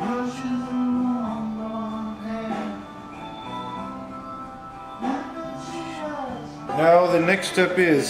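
No technical faults are audible.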